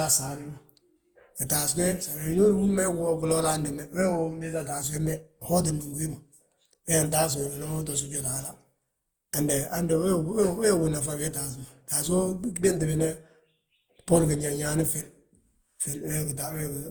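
Throughout, the speech sounds swirly, smeared and hollow with blurred onsets, beyond what one 64 kbit/s Opus-like encode explains: likely generation loss from roughly ten re-encodes.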